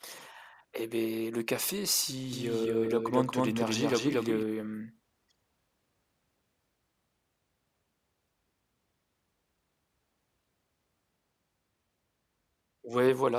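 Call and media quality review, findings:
Doubled audio track, 2.33 to 4.43 s: speech heard twice, a dry full-band copy trailing by roughly a fifth of a second at about the same level, cutting in and out abruptly. Likely a second, slower capture path mixed in alongside the main one.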